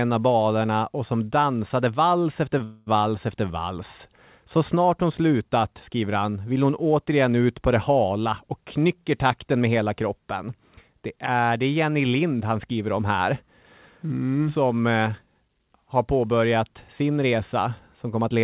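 At 2.58 s, just after "som dansade vals efter", a short stall from a late packet occurs. The jitter buffer ran empty briefly. The last sound is stretched with a faint buzz until audio resumes.

From 2.64 to 2.88 s, a call audio freeze follows. For about 0.23 s the sound is held as a fading buzz, with nothing lost. It resumes at "efter vals". The likely cause is packets delayed in transit.

From 8.66 to 9.76 s, after "på det hala och", a jitter buffer speed-up runs. Short pitch-period pieces are cut, about a tenth of a second in total. The speech plays roughly 8% faster at unchanged pitch and sounds hurried.

Throughout, nothing is heard above 4 kHz. This fits a G.711 A-law call codec.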